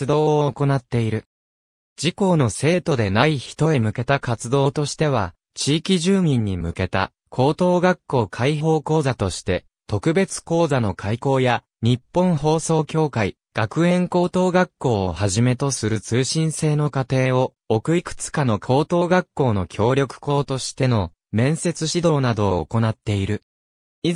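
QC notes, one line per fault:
No faults found.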